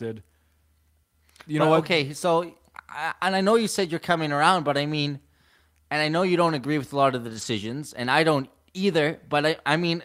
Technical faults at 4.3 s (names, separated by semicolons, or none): none